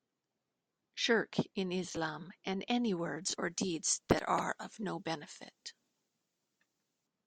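Pre-emphasis left on affects this speech clip from 3.22 s to 7.07 s, beginning right after "and any". The treble lift applied before recording or transmission was never undone by the matching de-emphasis, so the top end stays boosted by about 13 dB at 10 kHz relative to 1 kHz, a shape that fits the 75 µs curve used in FM broadcasting. The result sounds thin, bright and sharply sibilant.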